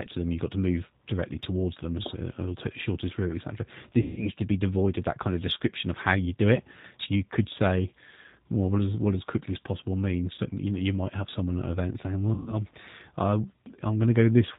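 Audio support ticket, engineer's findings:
G.729 codec, whole clip: speech band-limited, nothing above 4 kHz, with a rough, slightly synthetic edge throughout. Damage is plainly audible. Sounds like 8 kbit/s G.729A: each 10 ms frame is rebuilt from a vocal tract filter, a pitch predictor and a few pulses, so fine detail gets replaced by a coarse model. Intelligible, but the top end and natural texture are gone.

VoIP packet loss concealed by the speech codec, 4.02–4.29 s: about 150 ms of audio missing. The decoder stretches its last pitch and filter into a fading buzzy tone or coloured noise, and speech stays weak a bit after it returns. Points to roughly five lost 30 ms packets.

Same fault at 10.35–10.40 s: a short smear covering about 30 ms, which fits a single dropped packet. Brief concealment, then recovery.

Same fault at 12.34–12.57 s: about 120 ms concealed, likely four packets. 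Same mechanism: the decoder extrapolates and fades the gain, and since each frame builds on the last, the speech sounds thin for a moment after packets resume.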